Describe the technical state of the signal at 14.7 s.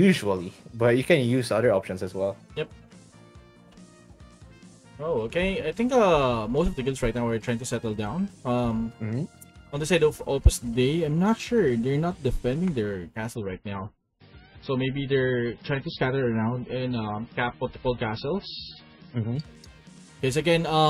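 At 14.7 s the signal is inside an adaptive stream drop to a lower bitrate, running 13.35 to 19.35 s. The slowed connection switched playback to a much leaner encode, consistent with a very low MP3 rate. Treble disappears above 5.6 kHz, with rising codec artefacts. On a spectrogram the upper band cuts off abruptly at both edges, while the waveform shows no gap.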